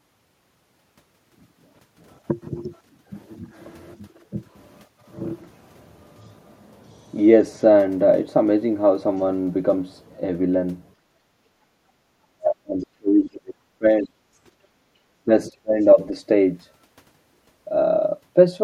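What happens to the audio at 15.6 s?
Between 15.5 and 15.78 s the speech abruptly sinks to near silence, breaking up across roughly a fifth of a second. This is speech suppressed in double talk: the echo canceller likely mistook the talker for loudspeaker echo while both sides spoke at once, and turned the talker down.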